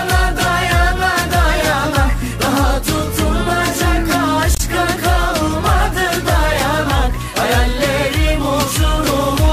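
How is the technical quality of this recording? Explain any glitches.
The recording has one audible glitch, caused by damaged data in a compressed stream, from 4.55 to 4.60 s. Corrupted bytes in the encoded stream break the decoder's frame sync, so it misdecodes briefly while hunting for the next valid frame header. This produces a short blip of about 56 ms.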